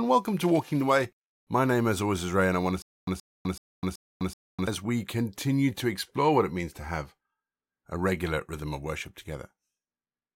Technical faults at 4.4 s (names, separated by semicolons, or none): stutter with silent gaps